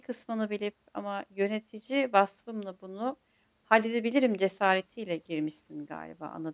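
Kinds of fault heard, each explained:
No technical faults detected.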